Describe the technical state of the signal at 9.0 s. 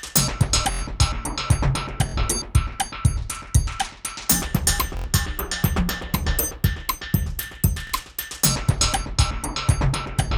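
At 9.0 s the signal is intact, with no audible fault at that moment.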